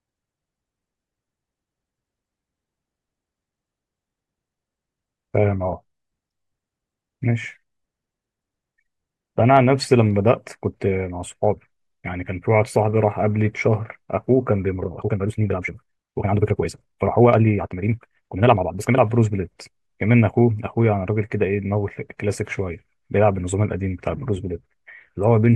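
A time-stretched section runs from 14.73 to 18.99 s, where the speech suddenly moves at about 1.79 times its surrounding pace while its pitch stays where it was. The result sounds rushed, with the delivery crowded before normal pace returns. This is likely software squeezing the passage to fit a shorter length, cutting out short slices of audio so the pitch holds while the duration shrinks.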